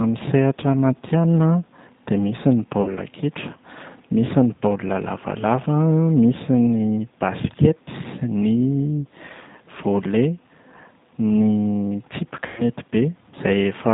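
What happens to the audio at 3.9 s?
At 3.9 s, as through the whole clip, the speech passes through a G.729 codec, likely at 8 kbit/s, rebuilt from a vocal tract filter, pitch predictor and sparse pulses. Nothing above 4 kHz survives, leaving plainly audible roughness and a synthetic, muffled edge.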